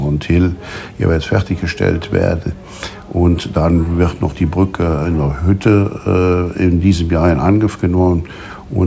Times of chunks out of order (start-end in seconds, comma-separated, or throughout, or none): none